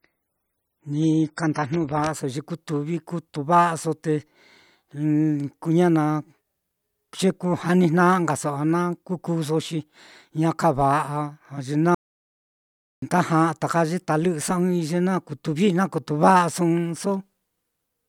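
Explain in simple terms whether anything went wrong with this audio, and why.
The player opened with an adaptive stream starting at a low bitrate, so for the first 2.0 seconds the speech sounds dull and smeary before suddenly turning clearer. Later, an audio dropout to silence, likely from a lost input connection, cuts the speech to dead silence from 11.95 to 13.02 seconds, about 1.08 seconds gone.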